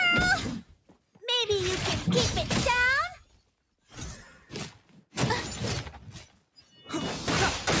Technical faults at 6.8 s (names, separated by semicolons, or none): noise suppressor applied to music or sounds; sound cut by the noise suppressor